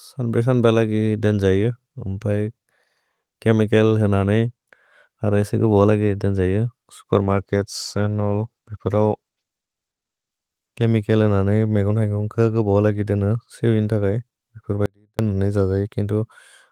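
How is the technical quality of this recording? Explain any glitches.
Two glitches stand out in the speech.

From 7.17 s to 10.91 s there is a call bitrate drop. The connection's bandwidth estimate fell and the encoder was pushed from 32 kbps down to 16 kbps, holding the lowest rate for about 3.7 s. With half the bits, the codec quantises the spectrum more coarsely and trims the top end, so the voice turns muffled and watery before clearing again. Unlike a dropout, the speech never disappears; it only degrades in texture.

At 14.86 s to 15.19 s comes an audio dropout to a faint residue lasting about 330 ms. The speech cuts out abruptly mid-flow, but the gap is not silent: a faint trace of sound remains, roughly 35 dB below the normal level. This was likely caused by the wanted signal being lost upstream while the path after the break stayed live. The sharp edges and that lingering residue separate it from a natural pause or a fade.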